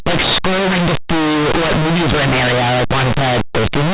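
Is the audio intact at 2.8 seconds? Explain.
No. At 2.8 seconds, as everywhere in the clip, the speech suffers from linear audio read as companded: plain linear 8-bit samples are being decoded as mu-law codes. Small values just to one side of zero expand into near-maximum outputs while their mirror values stay tiny, so the sound is a harsh, very loud distortion. Ordinary 8-bit audio would instead leave only a faint grainy hiss far below the signal.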